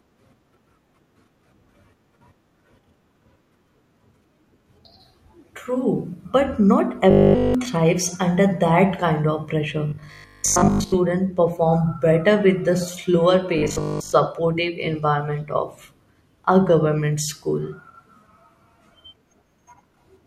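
At 7.1 to 7.5 s, 9.9 to 11.0 s and 13.6 to 14.1 s the speech turns into a rigid metallic 50 Hz buzz, the robotic sound from repeated short buffers, likely caused by a roughly 20 ms buffer replaying while fresh audio is skipped.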